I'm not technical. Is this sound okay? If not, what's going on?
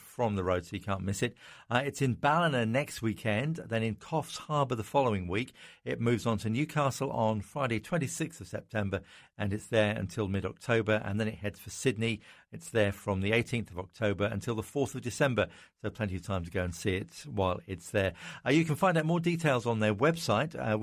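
Yes, nothing stood out as wrong when listening to this speech recording.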